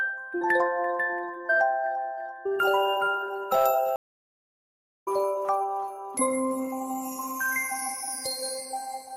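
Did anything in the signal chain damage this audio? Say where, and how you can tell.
Yes, at the network stage: a stream reconnect. The audio drops to silence from 3.96 to 5.08 s, about 1.09 s, then resumes roughly a second further on, skipping material. The waveform shows a flat gap and the spectrogram a blank column, with the content misaligned across it.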